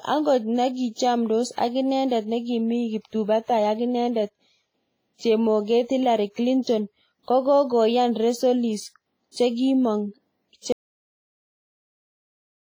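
WMA compression, most likely, runs throughout this speech clip: heavy ringing, washy smearing and breathing hiss that fits an early WMA encoder at a low bitrate around 24 kbps. An audio dropout to silence starts at 10.72 s and lasts to the end, leaving silence with no room tone, as if the input was lost.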